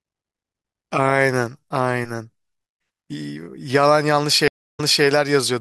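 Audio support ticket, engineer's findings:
Stream reconnect at 4.48–5.05 s: speech drops to silence for 0.31 s, then resumes 0.26 s earlier, replaying audio. Connection broke; player reconnected, fresh decoder started on a resent server burst.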